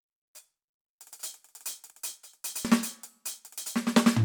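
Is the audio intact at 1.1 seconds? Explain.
Yes, the music plays through 1.1 s intact, with no audible fault at that moment.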